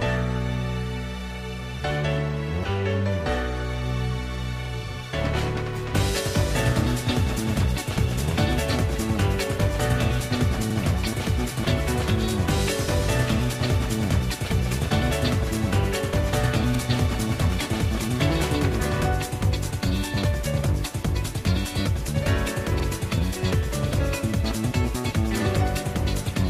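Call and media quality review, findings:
Overlapping chunks: short stutter at 4.66–4.70, 10.70–10.75 and 22.80–22.85 s, about 48 ms replayed at each join. Chunker spaced at 6 s is probably re-sending the previous chunk's tail.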